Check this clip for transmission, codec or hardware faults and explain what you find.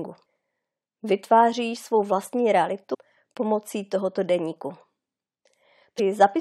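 Two short faults interrupt the speech, both from damaged data in a compressed stream. From 2.93 to 2.95 s, and again at 5.98 s, the audio breaks into a brief squawk or blip lasting only a few hundredths of a second. Part of the compressed stream was wrong there: bytes were lost, zeroed or overwritten. The decoder misread those frames, lost sync and had to search for the next valid frame header before it could resume clean decoding.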